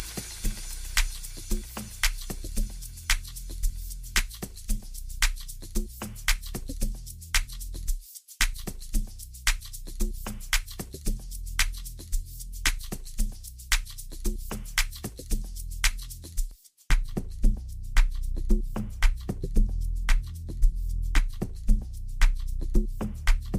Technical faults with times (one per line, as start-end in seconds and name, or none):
0.00-16.51 pre-emphasis left on